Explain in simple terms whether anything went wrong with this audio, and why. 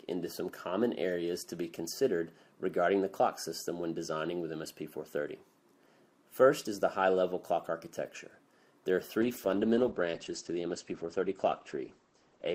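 From about 9.23 s to the end, there's a call bitrate drop: the connection squeezed how much data the sound could use, so it turns rough and muffled, losing everything above about 8 kHz, and it never recovers before the clip finishes.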